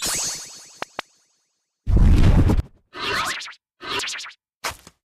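At 0.37 s the audio jumps ahead, skipping roughly a tenth of a second. The same thing happens at 2.60 and 3.34 s, each losing about 200 ms, and again at 3.99 s, where roughly 300 ms vanishes. There's no gap of silence, just an abrupt splice. This is likely a dropped buffer (overrun): the capture side didn't read its samples in time, so they were overwritten and the surrounding audio got butted together.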